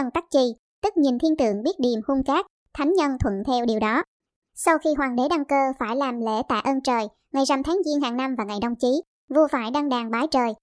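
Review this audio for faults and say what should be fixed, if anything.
Wrong sample rate, throughout the clip: the speech is played without conversion at a faster clock than it was recorded at, which fits 16 kHz audio replayed at 22 kHz. Speed rises 1.38 times and pitch about 5.6 semitones together, sounding high and hurried. To prevent it, read the file's true sample rate and resample to the playback device's rate before output.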